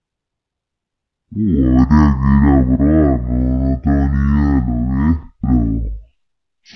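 From start to finish this speech runs at half speed and a full octave low, the classic wrong sample rate sound. It sounds like audio recorded at 44.1 kHz being played back at roughly 22 kHz with no conversion, so everything comes out slow, deep and sluggish.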